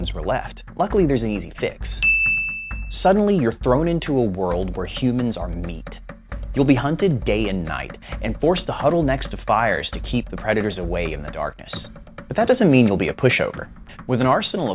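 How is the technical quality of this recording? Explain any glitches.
No glitches or faults are audible.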